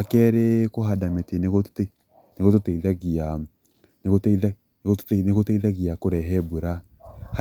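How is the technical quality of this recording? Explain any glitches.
No technical faults or glitches can be heard anywhere in this recording.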